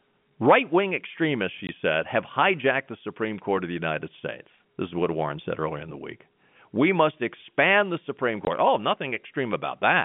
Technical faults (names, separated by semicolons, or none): packet loss filled with silence; loud pop